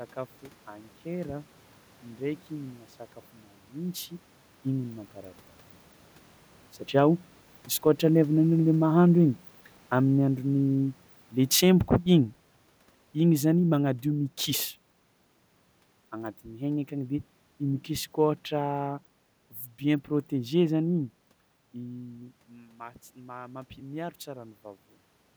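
From 8.46 s to 12.39 s the automatic gain control judges the input too loud, or its background noise too strong, and eases its gain down, a case of automatic gain falling. Over those four seconds the whole level sinks by about 7 dB, and the room noise drops along with the speech. That separates it from the level shifts around 4 s and 21.5 s, where the talker moves relative to the microphone while the background stays steady.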